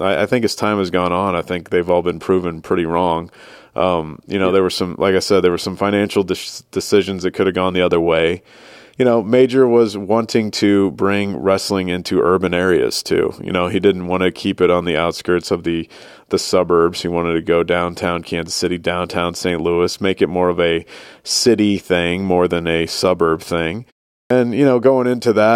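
Right after "than a suburb thing", at 24.24 s, there's a clipped start after a pause: the output woke late from a 0.41 s gap, swallowing the first 64 ms.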